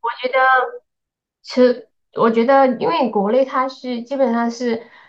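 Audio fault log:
Nothing stood out on listening to this speech recording.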